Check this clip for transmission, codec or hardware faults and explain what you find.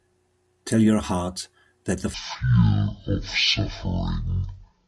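One fault is present. From 2.14 s to the end, the speech has a wrong sample rate: it plays at exactly half speed and a full octave (12 semitones) lower, which fits 48 kHz audio being played out at 24 kHz with no conversion. Unlike a pitch shift or time-stretch, speed and pitch drop together, making the voice slow, deep and dragging.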